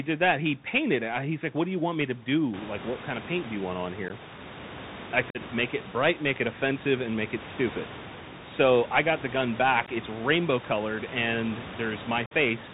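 Bluetooth CVSD headset codec runs through the whole clip. The speech is coded one bit per sample with an adapting step size, which fits a 64 kbps CVSD link. Nothing above 4 kHz survives, and the codec damage is plainly audible as granular, scratchy coding noise riding on the speech.

Unconcealed Bluetooth headset packet loss breaks the speech four times. At 4.08 to 4.11 s, right after "do you want on", about 15 ms of audio drops out. At 5.30 to 5.38 s, a gap of about 45 ms follows. At 9.86 to 9.90 s, just after "I got the gun", another 15 ms is lost. At 12.26 to 12.33 s, about 52.5 ms disappears. In each case a few voice packets between headset and phone never arrived and nothing filled in for them, so the speech has holes with abrupt edges. The two longer gaps point to several packets lost in a row. The room noise, which rises by about 16 dB around 2.5 s and then sits about 16 dB below the speech, belongs to the recording rather than the link.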